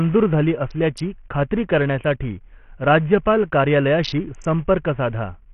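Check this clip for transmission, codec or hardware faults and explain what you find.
One codec fault is present across the whole clip.

Bluetooth SBC compression, throughout the speech: the damage is heavy and points to a very small bit pool, fitting a low setting near 48 kbps, likely from a Bluetooth link using SBC. The codec divides the signal into a few wide frequency bands and hands out bits without modelling what the ear notices, so the quiet upper bands are starved first. The treble drops in and out, and a gritty, aliased roughness sits over the speech.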